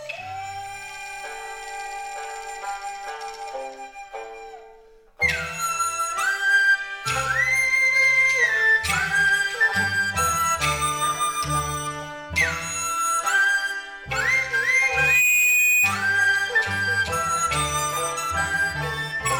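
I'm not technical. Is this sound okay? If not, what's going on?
No. From 14.76 to 15.96 seconds there is loudspeaker feedback squeal. A microphone is picking up the loudspeaker it feeds, so the sound goes round and round and gets louder each trip. One high pitch, near 2.5 kHz, takes over. It swells for about half a second. Then it rings louder than the rest of the audio before stopping.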